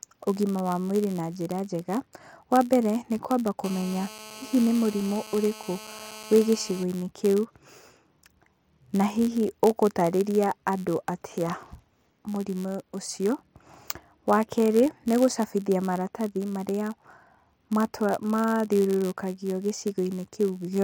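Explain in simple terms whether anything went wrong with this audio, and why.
Two things went wrong. The first is a block size mismatch (padded), and it runs through the whole recording. One part of the system hands over chunks of audio slightly smaller than the next part expects, and the leftover space in each chunk is filled with silence. Those tiny gaps repeat about 91.5 times a second, so a low buzz sits under the speech throughout, and everything plays very slightly slow (about 0.4 percent).

The second is GSM phone buzz, from 3.64 to 6.84 seconds. A mobile phone on an older network was on a call close to the recording equipment. It transmits in rapid pulses, and the audio circuitry picked those pulses up as sound. The result is a harsh, rasping buzz at about 217 Hz. It stays steady for those three seconds, sits well below the speech, and has nothing to do with what is being said.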